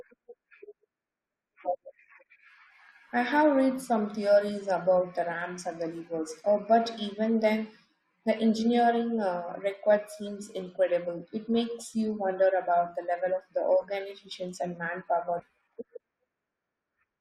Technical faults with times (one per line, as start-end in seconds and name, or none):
15.39-15.44 stream segment skipped